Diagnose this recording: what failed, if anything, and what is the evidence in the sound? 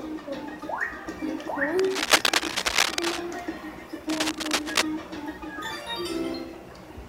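Dense, uneven scratching bursts sit over the sound from 1.79 to 3.20 s and again from 4.09 to 4.83 s, roughly 5 dB above the sound itself. This is cable scratch noise in the analogue wiring, likely a worn connector moved while its contact resistance fluctuated.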